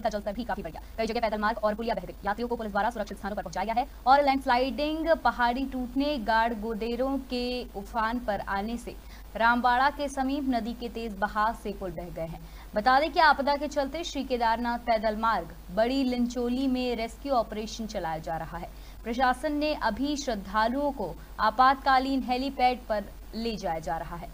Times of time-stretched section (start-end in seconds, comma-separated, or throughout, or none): 0.00-4.54